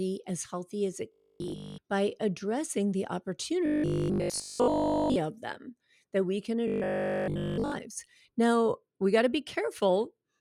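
From 1.12 to 1.78 s, 3.66 to 5.16 s and 6.68 to 7.72 s, robotic sound from repeated short buffers turns the speech into a rigid 50 Hz buzz, likely from audio arriving too seldom. The looped fragments fit a 20 ms buffer. A spectrogram shows even harmonic stripes, and the waveform repeats identical cycles.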